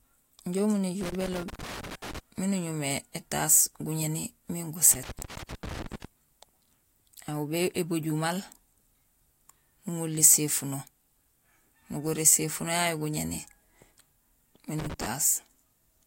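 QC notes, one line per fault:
1.01–2.19 s: loose connector crackle. An irregular burst of scratching and crackle sits on the speech just before "miin uñumé étaas guñéni". A worn or dirty contact is making and breaking, chopping the signal into fragments.
4.91–6.05 s: loose connector crackle. It returns right after "uñumé étaas guñéni miin". The same erratic chopping is heard.
14.79–15.06 s: loose connector crackle. This is a brief final burst of the same scratchy dropout.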